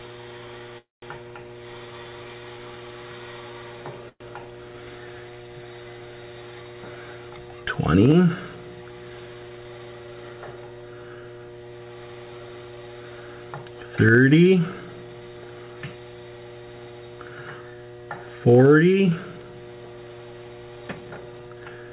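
Packets held up in transit likely let the jitter buffer run dry twice, producing a call audio freeze at 0.78 to 1.04 s and again at 4.09 to 4.22 s. Each time the receiver stretches the last sound into a fading buzz or hiss that drops to silence, for about 170 ms in the first freeze and 50 ms in the second. The audio then resumes where it stopped, so nothing is lost, but the first freeze inserts 242 ms of delay and the second adds 113 ms. From 20.88 s to the end at 21.91 s, the buffer is holding more than its target, so the receiver performs a jitter buffer speed-up, repeatedly cutting pitch-period-sized slivers totalling around a fifth of a second. The sound plays at 122% speed with unchanged pitch and comes across as hurried. Throughout, the call path's band limit leaves nothing above 4 kHz, which fits G.711 mu-law at 64 kbps.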